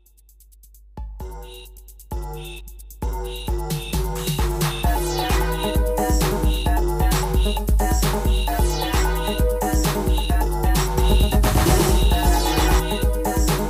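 The audio carries a doubled audio track from 10.98 to 12.80 s: a second, equally loud copy trails about 150 ms behind, likely from a slower capture path mixed back in. On a waveform or spectrogram, every onset appears twice, cleanly repeated, with abrupt edges.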